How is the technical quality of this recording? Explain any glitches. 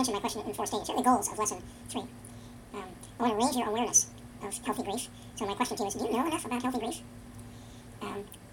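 The technical quality is poor. Audio read two samples at a time (double speed), throughout: pairs of samples were treated as single frames, so everything plays twice as fast and a full octave higher.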